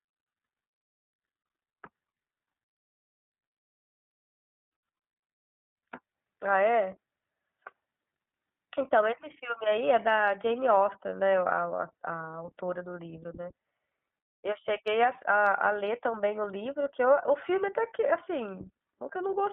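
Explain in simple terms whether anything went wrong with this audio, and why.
The iLBC codec, a phone-call voice coder, processed the whole clip and cut everything above 3.6 kHz, so the speech sounds muffled, thin and slightly synthetic.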